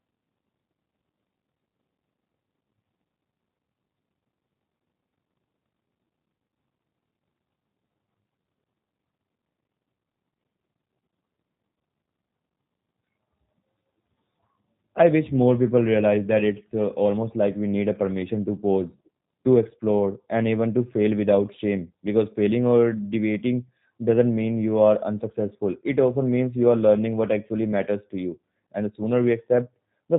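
Speech runs through the G.729 codec for its whole length, with audible damage: a rough, slightly synthetic buzz from pulse-based rebuilding of each 10 ms frame, which fits 8 kbit/s G.729A, and nothing above 3.8 kHz. Plain band-limiting would cut highs without that grainy roughness.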